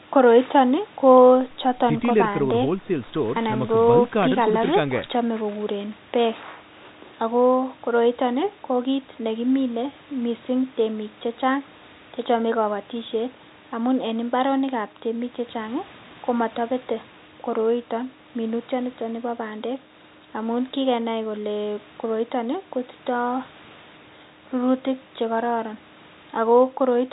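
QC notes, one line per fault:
No faults found; the speech runs over a narrowband call path, consistent with G.711 A-law at 64 kbps, with nothing above 4 kHz.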